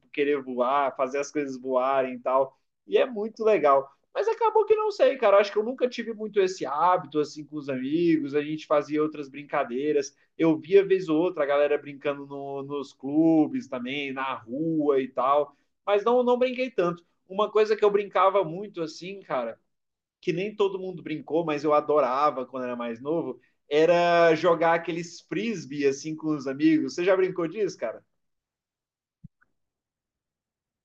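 No technical faults are audible anywhere in the speech recording.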